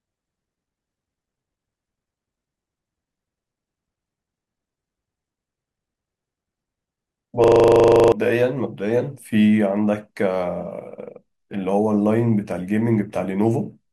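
From 7.44 to 8.12 s the system stalled while the audio hardware kept replaying its ring buffer: a system hang loop. One 40 ms slice of speech repeats 17 times at 25 Hz, giving a rough buzzing stutter in place of about 0.7 s of speech.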